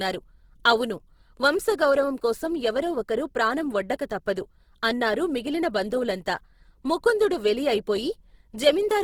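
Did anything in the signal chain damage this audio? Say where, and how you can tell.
Yes, at the codec stage, throughout the speech. It sounds rough and grainy, likely from Opus compression in its CELT mode at a low bitrate, around 16 kbps. A spectrogram shows content up to 20.3 kHz with few holes, but bands filled with speckled noise.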